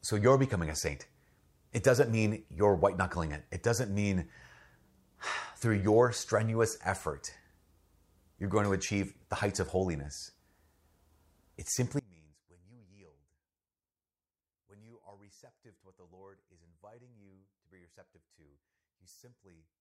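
From 11.99 s to the end, the speech drops by about 28 dB. Likely one channel inverted: the shared centre cancels in mono, leaving only a faint residue.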